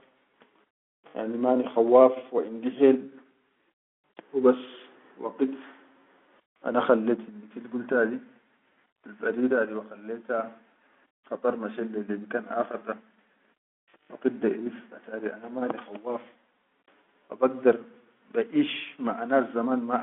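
No faults are audible anywhere in this speech recording.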